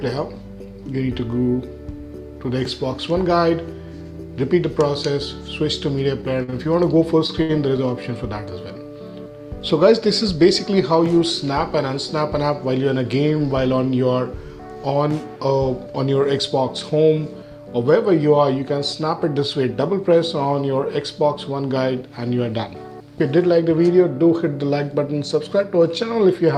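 Repeated stalls (stutter) run from 6.21 to 7.80 s: packets arrived late, so the jitter buffer emptied six times. Each gap, the longest 69 ms, was bridged by extending the preceding sound, filling 172 ms in all. Nothing drops out, yet the passage drags and hiccups.

A jitter buffer speed-up follows at 12.20 to 12.69 s. Holding more audio than its target, the receiver trimmed short pitch-period slices repeatedly, about 50 ms in total, so the sound runs at 109% speed with unchanged pitch and feels briefly hurried.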